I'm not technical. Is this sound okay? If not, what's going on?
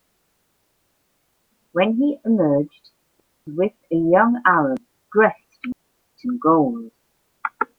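No. There are two digital wireless dropouts, at 3.20 to 3.47 s and 5.72 to 6.14 s. The wireless link lost too much data, so the receiver briefly muted, leaving clean silent gaps of about a quarter second and nearly half a second, with no crackle around them.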